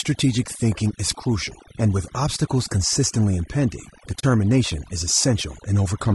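A speech recording carrying three kinds of damage. Overdone noise removal runs throughout: the background is pushed down and breaks up into twinkling specks, and quieter parts of the voice are pulled down with the noise estimate. That is unlike a simple gate, which would cut whole stretches rather than flickering individual frequency bands. Over the same span the voice is rough and grainy, with noise filling the gaps between harmonics and a synthetic-sounding top band. This is likely low-delay AAC compression (AAC-ELD), whose short frames smear pitch detail, at a rate that fits about 32 kbps. It differs from the denoiser's watery flicker by its steady graininess. Right after "with obstacles consistently impending", from 4.19 to 4.24 s, AAC frame loss with muting leaves a soft-edged hole, faded out and back in, which fits about 40 ms of lost frames rather than a hard dropout.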